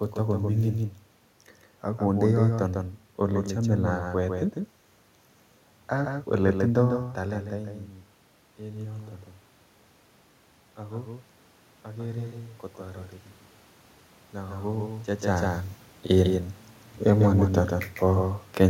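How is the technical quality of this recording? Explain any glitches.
The speech is marred by a doubled audio track from start to finish. Every syllable is followed by a second, somewhat quieter copy, roughly 150 ms behind and about 5 dB down, giving a stuttering, slapback quality. The copy is full-band, with no decay or room colour, so it is not a natural echo. The likely cause is the same signal reaching the mix twice, once directly and once through a slower path. The room noise under the speech, and the level shifts near 7 s and 15 s where the talker moves relative to the microphone, are part of the recording rather than glitches.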